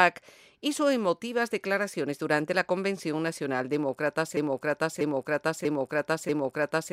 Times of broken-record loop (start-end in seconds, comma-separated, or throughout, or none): 4.37-6.93